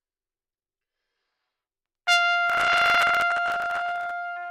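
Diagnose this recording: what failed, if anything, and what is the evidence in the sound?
Processor overload crackle, at the driver and buffer stage: from 2.50 to 4.11 s the sound picks up a gritty tearing. The processor kept missing deadlines on buffers of around 10 ms, dozens of times over that stretch, and each miss replayed a scrap of old audio with hard edges.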